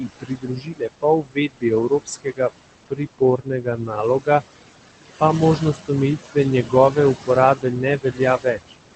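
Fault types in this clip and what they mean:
Noise suppressor artifacts: throughout the clip, the suppressor lowers every band it judges to be steady noise by about 19 dB, frame by frame. The room noise, only about 11 dB below the speech, sinks in the pauses and rises back under speech.
Speech cut by the noise suppressor: at 0.0–2.51 s, 2.86–4.42 s, 5.58–5.9 s and 6.24–8.74 s, the suppressor took parts of the speech for noise and turned them down, by about 21 dB at worst. Over a little more than three seconds in all, quieter sounds come out faint or swallowed.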